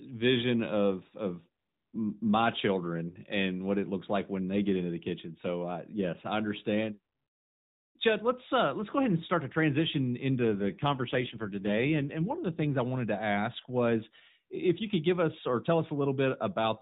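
Just after "and start to transition", from 10.41 s to 12.79 s, the speech has an AMR rate drop. The mobile link forces the AMR-NB codec to a lower mode, and the rougher, buzzier, more synthetic quality fits a step from 12.2 down to about 5.9 kbps. It recovers by "I wanted to ask". A spectrogram shows the same 4 kHz ceiling and no gap, but the harmonics blur and grow patchier. The waveform stays continuous.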